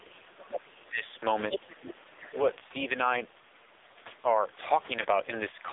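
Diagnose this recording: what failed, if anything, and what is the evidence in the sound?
Codec stage: AMR narrowband mobile codec damage runs through the whole clip. Nothing passes outside roughly 300 Hz to 3.7 kHz, and the speech is heavily buzzy and synthetic. That points to a low AMR-NB mode near 5.9 kbps, not a simple band-limited analogue line, which would lack the synthetic texture.

Call processing: speech is suppressed in double talk from 0.00 to 0.71 s, dropping by about 25 dB, and again from 0.88 to 1.06 s, dropping by about 15 dB. The likely cause is an echo canceller attenuating the near talker while the far end speaks. A dropout or gap would cut the sound completely rather than duck it.

Call processing: the other side's voice leaks through at 0.72 to 0.89 s, very faint at about 35 dB below the speech, then at 1.50 to 1.74 s, nearly as loud at about 5 dB below, and at 2.28 to 2.40 s, about 25 dB below. 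This is likely residual loudspeaker echo, a second talker superimposed on the first rather than crosstalk hum or noise.

Network: lost AMR speech frames cause a single 20 ms frame loss between 5.02 and 5.06 s. It produces a brief dip or warble as the decoder repeats the previous parameters at reduced gain. A run of lost frames would stretch the sound and fade it out, but this is one short concealed event.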